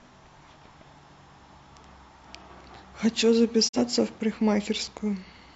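It's a speech clip with a digital broadcast dropout from 3.67 to 3.79 s. The sound fades out over roughly 20 ms, sits in silence, then picks back up further along, so about 43 ms of programme never arrives. The receiver lost a frame, or got one that failed its checksum, and muted until good data returned. A gap that short fits a single dropped frame rather than a longer loss of signal.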